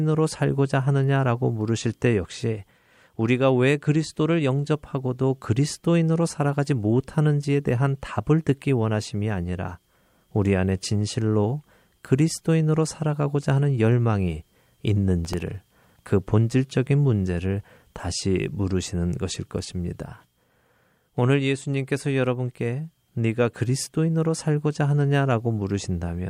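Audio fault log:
15.25–16.08 s: processor overload crackle. A gritty tearing rides on the speech for about 0.8 s. The processor misses deadlines on very small buffers, under a millisecond each. Each miss repeats stale audio with hard edges. It sounds like roughly twenty misses, then stops.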